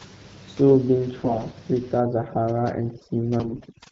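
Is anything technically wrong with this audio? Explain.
Yes. Two faults can be heard in this speech clip.

From 1.19 to 1.54 s, and again from 3.40 to 3.66 s, the voice turns hoarse, scratchy and gargly while keeping roughly its pitch and loudness. These are AMR bit errors. Over a weak link, several percent of the less protected bits in each coded frame arrived flipped, but the check on the critical bits still passed, so the frames were decoded anyway. The excitation pulses then land in the wrong positions, and the fine pitch, gain and spectral values drift. Both bursts span a run of consecutive 20 ms frames.

From 2.0 s to the end, the gaps fall to near silence dotted with twinkling specks. This is overdone noise removal. The suppressor was set too aggressively, so it drives any frequency band close to its noise estimate far down or off entirely. The room noise sits only about 22 dB below the speech, which puts the quieter parts of the voice near that estimate, so they are removed along with the noise. 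The leftover isolated bins flicker as musical noise.

Outside the bursts, the wideband character of the coding points to AMR-WB at around 12.65 kbit/s.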